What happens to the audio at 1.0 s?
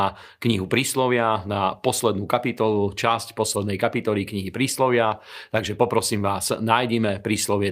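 Nothing goes wrong at 1.0 s; the audio is intact at that moment, with no dropout, click, distortion or other fault.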